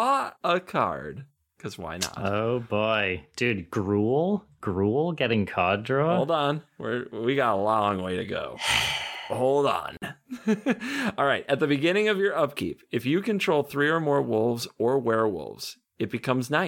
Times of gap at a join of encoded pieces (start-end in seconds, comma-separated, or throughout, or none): 9.97-10.02